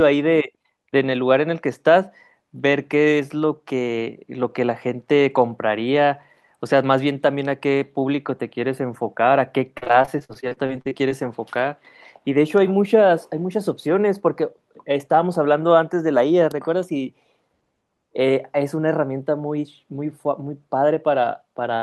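Repeated packet loss (robotic sound) runs from 9.77 to 11.12 s. The speech breaks up again and again in a rapid series of holes, the longest 47 ms. Each hole is papered over by stretching the preceding sound. About 300 ms of real signal goes missing, and 390 ms of filler is heard, so 29% of the stretch is concealed and comes across as choppy.

A jitter buffer speed-up follows from 21.02 to 21.43 s. The receiver was holding more audio than it targets and shed the excess by cutting out short pitch-period slices, roughly 40 ms in total. The speech plays at 108% speed with its pitch unchanged, sounding briefly rushed.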